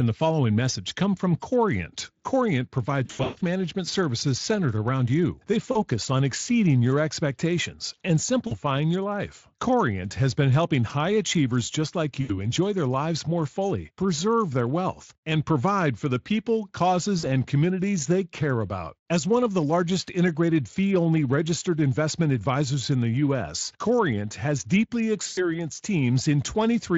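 The worst VoIP packet loss concealed by the speech codec comes at 3.05 to 3.42 s. Gaps scattered over about 360 ms, the longest about 140 ms, are filled by the decoder repeating its last pitch and filter at falling gain. Shorter dropouts follow at 5.71 to 5.83, 8.47 to 8.58, 12.21 to 12.51, 17.19 to 17.26 and 25.27 to 25.46 s. Each is stretched into a buzzy tone or a fading coloured noise, then weak or distorted while the Speex coding, light throughout, recovers. A spectrogram shows frozen horizontal harmonics fading out. The waveform shows repeated identical cycles shrinking in amplitude.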